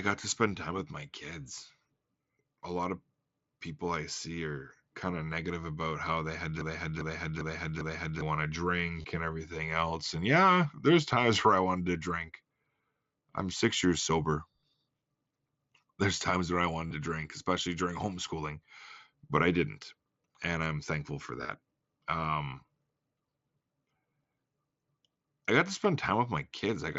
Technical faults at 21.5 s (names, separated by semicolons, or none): concealed Bluetooth headset packet loss